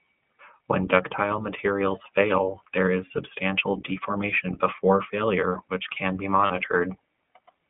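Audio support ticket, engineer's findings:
iLBC codec, whole clip. Narrowband speech, nothing above about 3.4 kHz and thin below about 150 Hz. Plainly audible roughness, slightly synthetic texture from frame-by-frame excitation coding. Character fits the 15.2 kbps, 20 ms frame mode of iLBC.

Lost iLBC frames, 6.46–6.52 s. Brief 40 ms held, faintly buzzy vowel-like fill where the decoder repeats the last pitch cycle blended with noise. Length fits two 20 ms frames. Speech recovers immediately afterwards, since each iLBC frame decodes independently.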